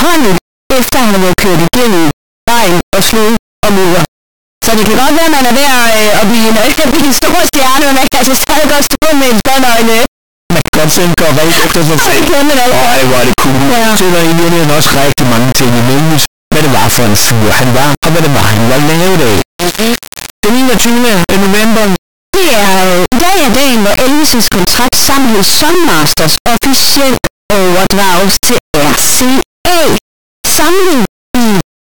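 From start to finish, integer read as float turns the speech into a harsh, extremely loud buzzing square wave, silent in quiet gaps. This fits 32-bit integer samples being read as 32-bit float.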